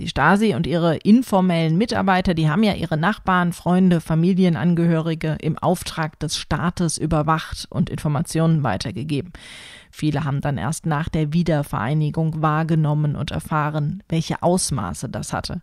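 Nothing goes wrong anywhere in this speech recording; there are no technical faults to point to at any moment.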